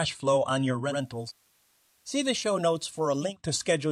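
Just after "flow on your", at 0.82 s, a faint hiss rises and the level falls by about 4 dB, lasting until 3.37 s. This is digital radio blending to analogue: the receiver lost its digital signal and cross-faded over 174 ms to the FM broadcast, then back.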